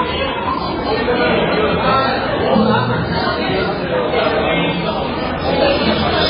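Sounds throughout, with the treble cut off cleanly above 5.2 kHz and a watery, swirling texture with smeared attacks, likely heavy MP3 compression at a very low bitrate.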